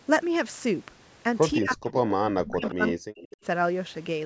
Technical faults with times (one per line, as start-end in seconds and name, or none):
1.57-2.12 speech suppressed in double talk
2.43-3.20 speech suppressed in double talk
2.65-2.73 echo leak
3.18-3.37 echo leak